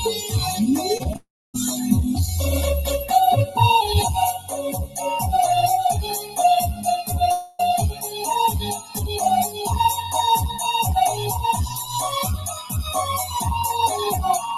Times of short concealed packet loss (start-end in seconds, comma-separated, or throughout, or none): 0.97-1.16